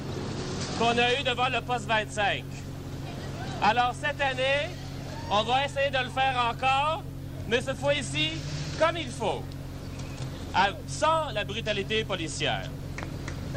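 A voltage spike, likely from a switch or driver glitch, enters the chain at 0.92 to 0.94 s and again at 13.03 to 13.05 s, each a single loud pop roughly 10 dB above the sound, which continues underneath.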